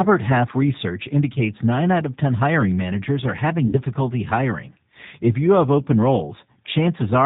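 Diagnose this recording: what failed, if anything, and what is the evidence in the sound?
Codec stage. The speech sounds rough and synthetic throughout, with nothing above 4 kHz. This is the G.729 codec, and its damage is plainly audible. The sound points to about 8 kbit/s.

Network stage. VoIP packet loss, concealed by the speech codec, occurs from 3.67 to 3.78 s. About 60 ms is extrapolated into a fading buzzy tone or coloured noise, which fits three lost packets. The sound recovers slowly afterwards.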